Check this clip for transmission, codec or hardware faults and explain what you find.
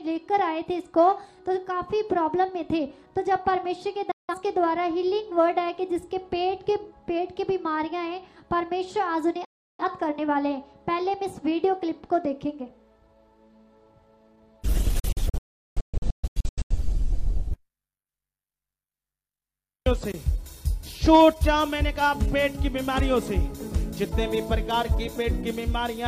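There are three digital broadcast dropouts. At 4.11 to 4.35 s and 9.45 to 9.84 s the receiver loses good frames and mutes, with a 3 ms fade, leaving holes of about 0.17 s and 0.34 s. From 14.99 to 16.76 s several short holes, the longest 0.38 s, remove about 1.1 s of audio in total.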